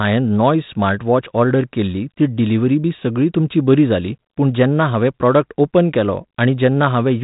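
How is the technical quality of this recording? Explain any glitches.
No glitches or faults can be heard anywhere here.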